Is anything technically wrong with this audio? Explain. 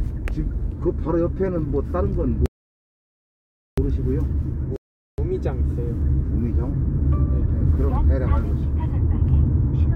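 Yes, there are two interruptions. From 2.46 to 3.78 s, a playback stall cuts the sound to silence for about 1.3 s, likely because the player starved or its thread blocked; unlike a rebuffering stall, it need not pick up exactly where it stopped. From 4.76 to 5.18 s, a rebuffering stall halts the sound while more downloaded audio arrives, then resumes at the exact same point, adding about 0.42 s without losing anything.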